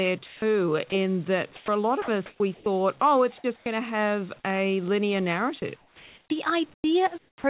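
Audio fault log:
0.26–0.92 s, 1.56–2.66 s, 5.6–7.44 s: sound chopped by the voice detector. The speech drops in and out as the sender likely toggled transmission. About 180 ms, 440 ms and 920 ms were replaced by comfort noise. On a spectrogram, harmonic speech bands break into short flat, smeared noise patches. The waveform shows envelope gaps filled with even hiss.
3.42 s and 3.64 s: onset clipped by the voice detector. The first 20 ms of each sound is missing, likely because the detector reacted late, so each sound starts abruptly without its soft rise. The waveform jumps from noise straight to the sound's level, with no ramp. On a spectrogram, each onset begins as a hard vertical edge.
3.56–3.66 s: comfort noise in place of the background. For about 100 ms the real background, which sits about 28 dB below the loud parts, gives way to steady, featureless noise about 14 dB quieter, likely synthesised during a transmission pause. 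On a spectrogram this is a uniform, textureless band with a visible step down in level. Like the rest of the clip, which passed through a 64 kbps call codec, it shows no energy above 4 kHz, which fits G.711.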